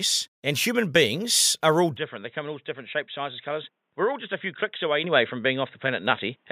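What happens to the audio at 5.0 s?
At 5.04 s the microphone volume steps up: the input gain jumps by about 7 dB in a single step, as if the call software judged the microphone too quiet and raised the device's input volume. The speech and the background noise get louder together and stay there. A talker raising their voice would not lift the background, and a gradual gain control would ramp up smoothly rather than step.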